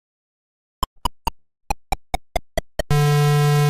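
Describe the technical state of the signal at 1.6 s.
At 1.6 s the signal is inside a likely long network dropout from 1.39 to 1.66 s. About 240 ms never arrived. A fading concealment buzz fills the gap, then brief silence.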